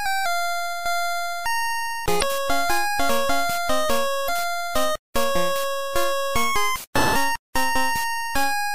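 The audio has two brief disruptions from damaged data in a compressed stream, at 2.18 to 2.23 s and 4.25 to 4.30 s, lasting about 44 ms and 53 ms. At both points part of the encoded stream was corrupted, so the decoder misread the affected frames and had to resynchronise on a later frame header. On a spectrogram and waveform, each shows as a short, abrupt patch that breaks the surrounding pattern, with hard edges at onset and recovery.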